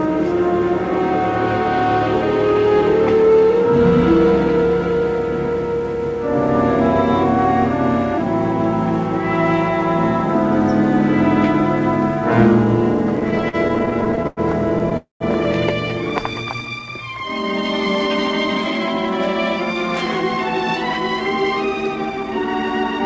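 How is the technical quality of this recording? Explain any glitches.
The recording has four timing glitches from a call link whose jitter buffer struggled to keep pace. The audio is band-limited, with nothing above 8 kHz, which fits a G.722 codec at around 64 kbps.

Repeated stalls (stutter), 13.16 to 14.40 s: packets arrived late again and again, so the buffer kept running dry and the receiver stretched the last sound about twenty times, the longest for 97 ms. That adds 308 ms, a quarter of the span, so the audio drags in a jerky stutter. Unlike a single freeze, the hold-ups are brief and close together.

Call audio freeze, 14.97 to 15.23 s: the sound hangs, fades, and drops to silence for about 140 ms before resuming where it stopped, 235 ms late. The likely cause is held-up packets emptying the jitter buffer. It is one long gap, not a run of short hitches.

Jitter buffer slow-down, 16.21 to 16.87 s: to rebuild its reserve, the receiver repeated single pitch periods, adding 94 ms. 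The audio plays at 87% speed with the same pitch, so it sounds drawn out rather than interrupted. Unlike a stall, there are no gaps.

Jitter buffer speed-up, 21.96 to 23.00 s: with too much audio queued, the receiver cut short pitch-period pieces, about 150 ms in total. The audio runs at 114% speed with the same pitch and sounds hurried, the mirror image of the earlier slow-down.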